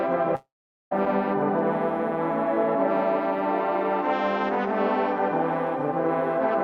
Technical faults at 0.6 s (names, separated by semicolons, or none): long network dropout